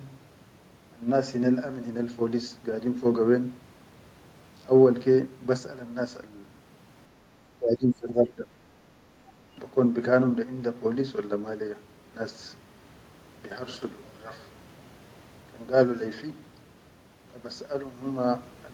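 From 7.57 to 8.47 s the speech sinks sharply, by roughly 20 dB at its deepest, thinning and breaking up for most of that second. This is likely speech suppressed in double talk: with both ends talking at once, the echo canceller mistook the local talker for loudspeaker echo and attenuated everything.

Shortly after, between 8.75 and 8.85 s, the room sound briefly dips by about 6 dB and then recovers. That is background gated by the echo canceller, which clamped the microphone down while far-end audio played, then released it.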